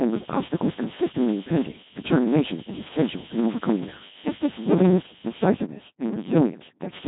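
From the first moment to the end, the speech carries a steady buzz at 100 Hz. This is a block size mismatch (truncated). One stage hands over blocks longer than the next stage takes in, and the tail of every block is dropped. Each cut leaves a small jump, and the jumps repeat at the block rate. The spacing fits blocks of 512 samples. Because audio is discarded, the speech runs about 1.16 times fast, yet its pitch stays near normal.

The whole clip has also passed through the Codec 2 vocoder, and the damage is heavy. This coder keeps only pitch, voicing, loudness and a rough spectral shape. The decoder then rebuilds the voice from sine waves, so the original waveform is gone. The result is robotic and buzzy. The sound points to a low rate, around 2.4 kbit/s. Nothing remains above 3.8 kHz, which leaves the speech dull and narrow.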